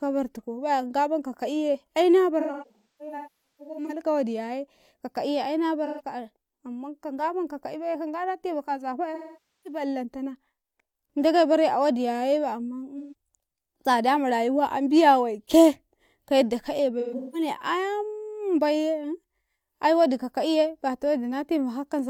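AAC frame loss with concealment hits this speech at 2.40–4.01 s (scattered, longest gap roughly 0.3 s), 5.85–6.01, 9.14–9.81, 12.98–13.13 and 17.00–17.48 s. The decoder rebuilds missing frames from the last good spectrum, so the gaps sound smeared and phasey rather than silent.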